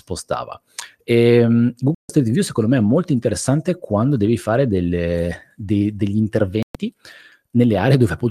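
At 1.95 s the speech cuts out for about 0.15 s, and again at 6.63 s, just after "fare delle de degli", for about 0.13 s. Both are digital broadcast dropouts: the receiver lost valid frames and muted, so that audio is gone. The waveform shows flat gaps, and the spectrogram shows blank vertical bands.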